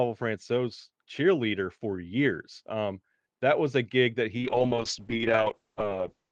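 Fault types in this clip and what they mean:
Call bitrate drop: The call's bandwidth estimate fell, so the encoder had far fewer bits to spend. From 4.39 s, just after "was a gig that", the speech turns rough and watery and stays that way to the end of the clip. The audio band also narrows, with the cut-off moving from 12 kHz down to 8 kHz, so it sounds duller. The coarseness fits an Opus rate falling from about 32 kbps to about 7 kbps.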